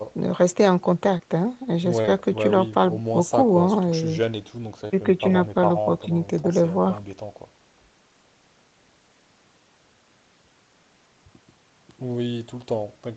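Short concealed packet loss occurs at 1.17 to 1.21 s, twice back to back from 2.01 to 2.10 s, at 4.88 to 4.92 s and at 6.42 to 6.46 s. Each time about 20 ms of speech failed to arrive, and the decoder bridged the hole by extending the preceding sound before blending back in. This produces a brief smear or wobble rather than the hard silence of a dropout or the sharp edge of a click. The doubled loss near 2 s smears longest, within sound that stops at 8 kHz, consistent with wideband Opus.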